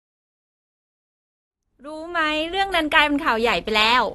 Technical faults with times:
0.00-4.14 AAC compression

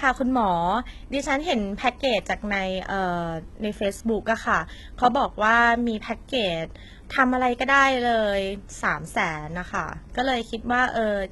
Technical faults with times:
0.00-11.31 HE-AAC compression

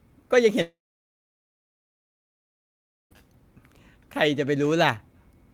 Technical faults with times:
0.61-3.13 long network dropout

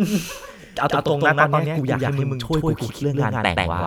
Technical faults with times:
0.00-3.86 doubled audio track

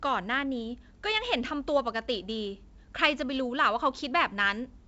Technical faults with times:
none

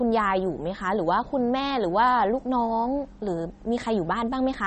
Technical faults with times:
0.00-4.66 MP3 compression

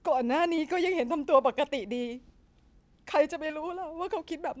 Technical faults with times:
0.56-0.59 short concealed packet loss
3.47-3.51 short concealed packet loss

